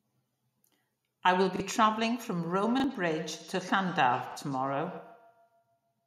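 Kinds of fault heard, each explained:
Repeated buffer: A brief stutter breaks into the speech at 1.56, 2.80 and 4.32 seconds, where a 40 ms slice plays twice in a row with a hard join between the copies. New audio failed to reach the playback device on time, so it replayed the last 40 ms block it held. Each repeat takes the place of the audio that should have followed, dropping about that much speech at every stutter.
Feedback echo between two devices: From 2.44 seconds to the end, each stretch of speech comes back roughly 150 ms later as a thinner, ringing copy, peaking at about 17 dB below the speech. This happens when two devices in the same room join one call. One plays the other's signal aloud, and the second device's microphone picks it up and sends it round again. Each echo canceller removes only its own playback, so this loop passes through.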